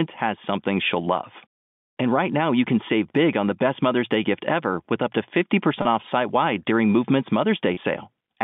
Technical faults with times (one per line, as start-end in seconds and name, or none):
5.82-5.85 packet loss with pitch repetition
7.74-7.77 packet loss with pitch repetition